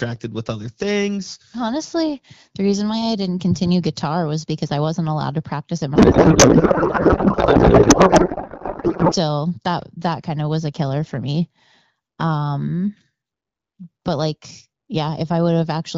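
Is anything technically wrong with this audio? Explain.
Yes. Between 5.95 and 9.14 s, after "allowed to practice at" and before "that that kind of", there is a codec payload misread. Octet-aligned AMR frames are unpacked as bandwidth-efficient, so the fields are misplaced and the speech turns into garbled, warbling noise.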